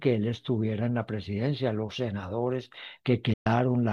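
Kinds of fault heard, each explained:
Digital broadcast dropout: the receiver mutes the speech with an 8 ms fade from 3.33 to 3.47 s, leaving a 120 ms silent hole, consistent with several corrupted frames.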